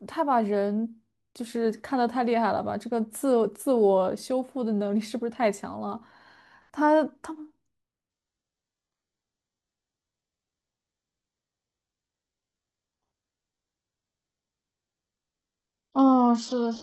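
From 8.10 s onward, the speech abruptly loses everything above 8 kHz: an adaptive stream switched to a lower bitrate.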